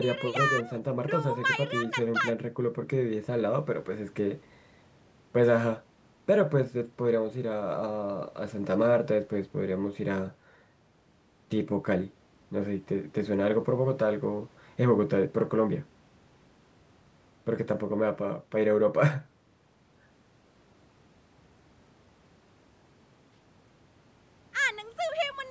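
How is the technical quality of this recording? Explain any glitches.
No glitches are audible: the speech has passed through a call's microphone processing, which trims the lowest bass and leaves nothing above 8 kHz, as expected for that path.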